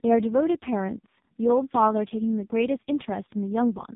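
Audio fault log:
Throughout, AMR narrowband mobile codec: the speech sounds buzzy, synthetic and muffled, with nothing above 3.8 kHz. A vocal-tract model driven by sparse pulses rebuilds each frame, and damage this heavy fits AMR-NB's lowest mode, 4.75 kbps.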